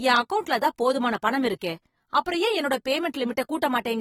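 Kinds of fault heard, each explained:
AAC compression: plainly audible smearing and fizzy sibilants from coarse spectral quantisation, with nothing above 19.4 kHz, likely AAC-LC coding at around 47 kbps.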